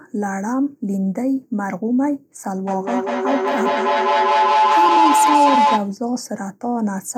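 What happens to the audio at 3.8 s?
At 3.8 s the speech is caught in a feedback howl running from 2.67 to 5.98 s. Two devices in the same room are sharing the call, so sound leaves one loudspeaker, re-enters a microphone and comes back stronger each trip. Instead of dying away, the repeats pile up, coming round roughly every 200 ms, and narrow to a tone near 1 kHz, peaking about 5 dB above the speech.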